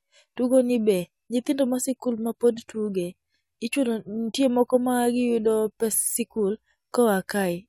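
No technical faults are audible anywhere in this speech recording.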